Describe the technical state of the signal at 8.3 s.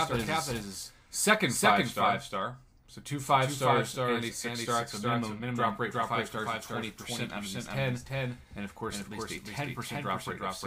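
At 8.3 s a doubled audio track is present, as it is throughout: a full-band copy trails the original by roughly 400 ms at about equal level, likely from a second, slower capture path. On a waveform or spectrogram, each event repeats as an identical, undecayed shadow shifted right.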